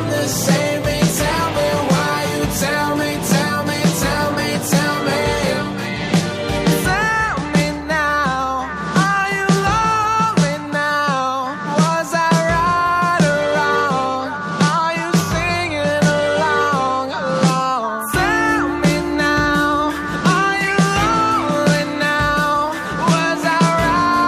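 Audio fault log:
No faults logged; nothing in the signal path calls for attention.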